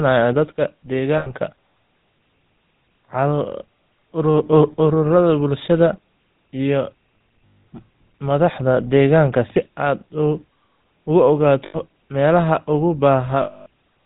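GSM full-rate codec damage runs through the whole speech clip. The audio is buzzy and gravelly and has nothing above 4 kHz, which fits a 13 kbps GSM full-rate path and its coarse pulse excitation.

Lost GSM frames then break in at 1.18 s (80 ms), at 7.46 s just after "ururada bulshada iyo" (180 ms), at 11.66 s (80 ms) and at 13.42 s (240 ms). In each gap the last good frame is repeated, leaving a rough, metallic ring.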